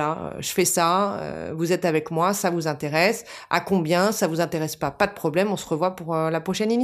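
No technical faults can be heard anywhere in the speech.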